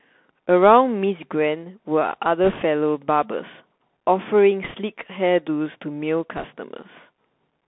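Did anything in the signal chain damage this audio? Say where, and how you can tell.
Yes, at the codec stage. The whole clip is speech squeezed into a band of roughly 150 Hz to 3.5 kHz, with a granular hiss underneath and scratchy s sounds. That's the Bluetooth CVSD headset codec, which fits a 64 kbit/s one-bit delta stream whose adaptive step can't keep up.

The radio link also has bit errors on the Bluetooth voice link, at 2.44–2.62 s, 4.64–4.76 s and 6.37–6.46 s. Each is a short rushing crackle with no sharp clicks, which fits an error rate of a percent or two. Every flipped CVSD bit weighs the same as any other, its error grows with the speech level, and the error fades out.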